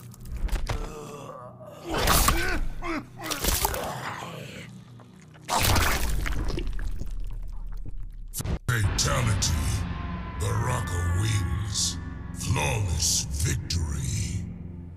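No dropouts, clicks, distortion or level jumps turn up anywhere in the recording, so there is nothing to flag.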